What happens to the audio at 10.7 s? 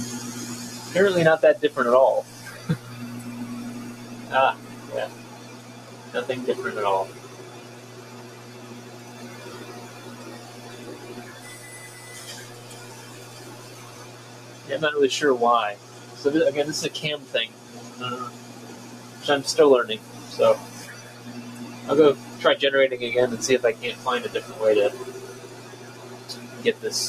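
At 10.7 s you're hearing the noise suppressor applied to music or sounds, and it isn't a one-off; it's active across the whole clip. A speech-oriented suppressor treats the sustained parts and any ambience or decay as noise and pulls them down, letting the onsets through. So the held portions and tails sink, with the level swinging by something like 15 dB, and the sound pumps and flutters as the suppression clamps and releases.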